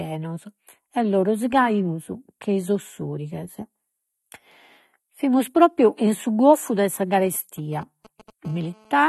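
Throughout, the speech sounds dull and smeared, with a fizzy, warbling edge on sibilants and nothing above 12 kHz. This is likely AAC compression at a low bitrate, plausibly around 32 kbps, where the coder drops the top band and leaves spectral holes.

From 7.26 to 8.30 s, just after "su goffu de sa", GSM signalling bursts appear: a galloping dit-dit-dit of brief 217 Hz buzzes, well below the speech level. A nearby 2G phone is transmitting short radio bursts that the audio circuit rectifies.

From 8.45 to 9.04 s, GSM phone buzz takes over: a steady, raspy 217 Hz buzz rich in harmonics, about 30 dB below the signal. The phone is now transmitting in bursts 217 times a second, and the rectified pulses enter the audio path.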